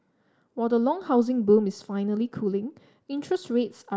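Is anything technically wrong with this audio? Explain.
No, nothing technically wrong can be heard here.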